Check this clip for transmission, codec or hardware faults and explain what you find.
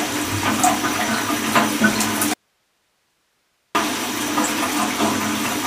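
There's one fault: an audio dropout to a faint residue from 2.34 to 3.75 s. For about 1.41 s the sound cuts out abruptly, leaving only hiss roughly 45 dB below the signal. That likely means the feed was lost while the downstream path stayed live.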